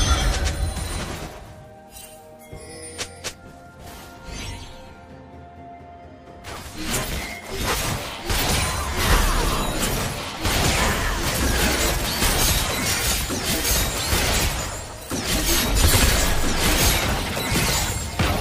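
No technical faults are audible.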